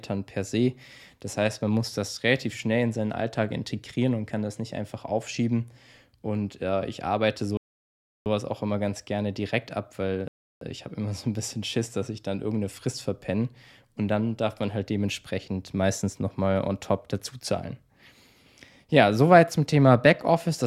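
At 7.57 s, after "äh ich arbeite", the speech halts in a rebuffering stall of 0.69 s, then continues with "auch immer ganz gerne". A second stall of 0.33 s follows at 10.28 s, after "ganz gerne direkt ab". Playback ran out of downloaded audio and waited. Unlike a dropout, each resumes exactly where it stopped, adding time without losing any sound.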